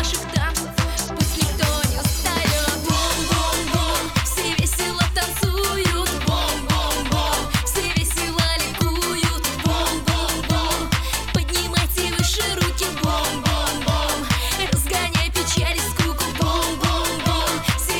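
No technical faults can be heard in the audio at any point.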